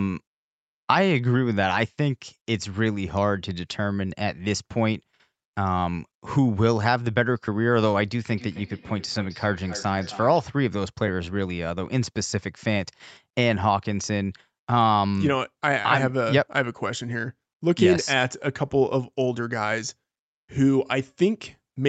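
From 8.29 to 10.51 s, feedback echo between two devices returns the speech about every third of a second, at about 17 dB below it. Unlike room reverb, each repeat is distinct and thinner.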